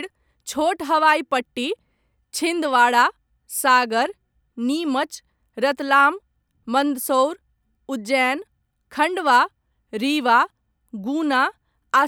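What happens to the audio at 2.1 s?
Nothing goes wrong at 2.1 s; the speech there runs on without any audible fault or interruption.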